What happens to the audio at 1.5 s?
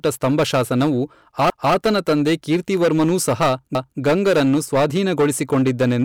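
At 1.5 s an overlapping-chunks fault makes a 250 ms stretch, running to 1.75 s, play twice. The next processing chunk, about 2 s long, began before the previous one ended, so the join repeats a short piece of speech and is heard as a stutter.

Hard clipping is also present here, as it is across the whole clip. The signal is driven about 12 dB past what the stage can pass, so roughly a tenth of samples are cut flat, adding a harsh fuzz to louder speech.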